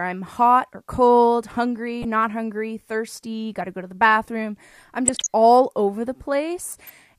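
Speech with DAB burbling at 1.87–2.05 s, 5.08–5.27 s and 6.70–6.90 s: residual bit errors corrupt sub-band data, showing as scattered, short to frame-long rectangular blotches across the spectrogram.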